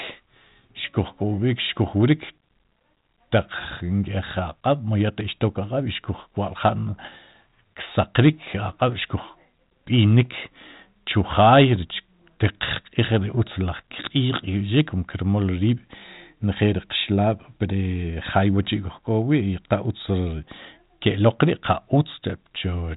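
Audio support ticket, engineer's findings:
Pop and short rough burst with a brief level change, 7.03 to 7.08 s. Bit errors on an ADPCM link, sparse, on the order of 0.1 percent. Each flipped bit upsets the decoder's step size and predictor, so the damage rings on across a few frames, within G.726 ADPCM audio capped below 4 kHz, consistent with 32 kbit/s.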